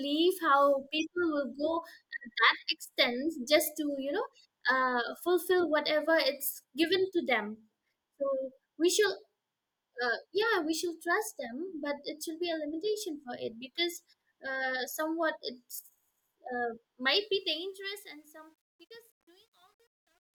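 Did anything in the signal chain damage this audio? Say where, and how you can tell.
Yes. From 17.18 s the fade-out turns gritty, worst from 18.08 s to 20.36 s. This is truncation distortion on a fade from an undithered gain stage, which fits 10-bit resolution.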